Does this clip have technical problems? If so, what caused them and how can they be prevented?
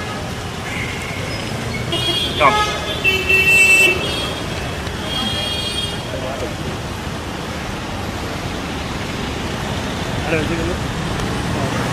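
Yes. A dropped buffer (overrun) at 3.96 s makes the sound jump ahead by about 10 ms, likely because the program fell behind and the hardware overwrote unread samples. It can be prevented by using a larger input buffer or giving the recording process higher scheduling priority so samples are collected in time.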